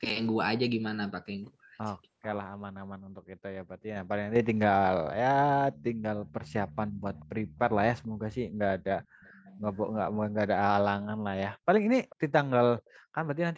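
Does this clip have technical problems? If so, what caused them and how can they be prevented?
Yes. This speech recording has an echo leak: faint, delayed copies of the speech surface at 2.22–2.36, 7.15–7.25, 8.03–8.07, 9.05–9.54, 12.09–12.16 and 12.79–12.91 s, each trailing the original by 439 ms and sitting roughly 20 to 40 dB below it. The likely cause is a loudspeaker on the far side of the call whose echo canceller let part of the replayed speech back into its microphone. Using a headset there, or retuning its echo cancellation, would prevent it.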